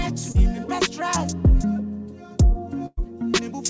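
At 0.32 to 0.36 s there is a short concealed packet loss. About 20 ms of audio never arrived in time, and the receiver covered it with roughly 23 ms of synthesized continuation before blending back into the real signal. It registers as a quick smear or wobble rather than a gap, with no silence and no audible fade. That lack of silence or fading separates it from a dropout or a longer burst, and the sound simply carries on.

From 2.86 to 3.07 s comes a burst of packet loss, a longer run of about 100 ms that went missing. The receiver extended the last sound for around 107 ms while turning it down, so it becomes a held, decaying tone or hiss. It then falls to about 20 ms of silence before the audio picks up further along, with roughly 11 ms dropped at the join. The fade into silence and the clear skip forward mark this as a burst rather than a brief concealed loss. Throughout, the G.722 call path leaves nothing above 8 kHz.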